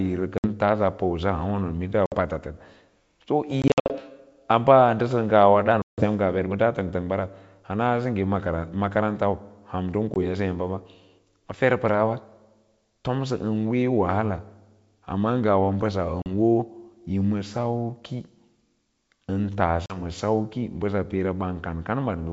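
Packet loss on an ADPCM call breaks this wideband speech at 0.38, 2.06, 3.62–3.97 (just before "a baa"), 5.82, 10.14, 16.22 and 19.86 s. Hard-edged silent gaps totalling 20 to 180 ms per event follow, and the decoder's predictor and step size drift out of step with the sender, so the sound returns slightly distorted.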